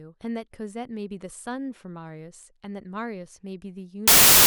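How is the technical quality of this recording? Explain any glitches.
The recording breaks down in its final stretch. From 4.08 s to the end, the samples are built from the wrong bytes: the reader assembles each sample with its bytes misaligned or swapped, so the rapidly fluctuating low-order bits end up as the dominant part of every value. For the last 0.39 s the speech is replaced by loud, harsh broadband noise.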